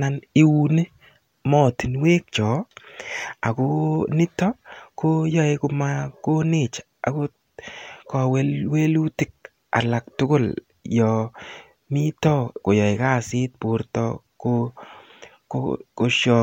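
No technical faults heard.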